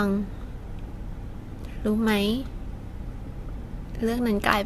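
All the way through, the speech has a swirly, hollow, smeared quality with soft consonant attacks and nothing above 14.2 kHz. That's likely generation loss, with the sound pointing to roughly three passes through an AAC-LC encoder near 64 kbit/s, each stacking fresh quantisation noise.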